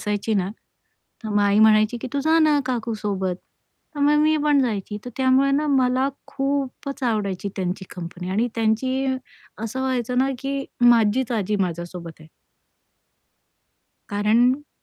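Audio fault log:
Nothing to log here, as this speech recording comes across without any technical faults worth flagging.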